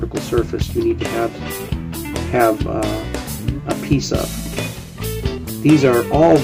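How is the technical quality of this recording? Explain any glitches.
Near the end, from 5.69 to 6.36 s, the recording suffers hard clipping. The signal is driven about 5 dB past what the stage can pass, so peaks are sliced flat. Those squared tops generate high harmonics, heard as harsh crackle on the loudest moments.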